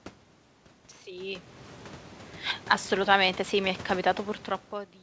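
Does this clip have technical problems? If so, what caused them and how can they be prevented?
No, there's nothing technically wrong here: the bit of room noise, the level shifts around 1 s and 4.5 s where the talker moves relative to the microphone, and the missing top end above 8 kHz from the G.722 call codec are all just part of how this was recorded and sent, so there's nothing to prevent.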